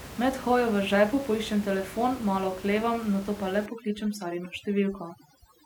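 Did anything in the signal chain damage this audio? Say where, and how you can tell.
Yes. The damage comes from call processing, specifically overdone noise removal, starting at 3.66 s just after "oklevam nato pa le" and lasting to the end of the clip. The suppressor sets its own estimate of the room noise, which before that point sits about 17 dB below the speech, and then pulls any frequency band near that level far down or out entirely. Quiet parts of the speech fall under that threshold and go with it. The background drops and breaks up into twinkling specks.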